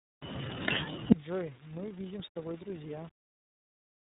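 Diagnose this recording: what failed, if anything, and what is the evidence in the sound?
Tandem speech coding at the codec stage runs throughout. The audio passes through G.726 at 24 kbit/s, G.711 mu-law and then iLBC at 13.33 kbit/s, so two speech coders compound each other's errors. Nothing remains above 3.8 kHz. The roughness and warble exceed what a single low-rate codec leaves.

From 1.12 s to the end the level falls by about 36 dB, leaving only a faint residue rather than silence. That residue separates this from a dropout or mute. The likely cause is one channel inverted in the wiring or playback path, so the common content cancels when the two channels are summed to mono.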